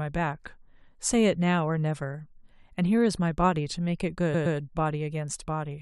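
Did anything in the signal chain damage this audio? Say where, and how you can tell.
Yes. Repeated frames from the codec or storage stage: from 4.33 to 4.56 s, a 116.1 ms block of the speech plays twice more, which fits a run of about five compressed frames. The clip grows by 232.2 ms. Unlike an echo, each repeat is an exact copy that stutters.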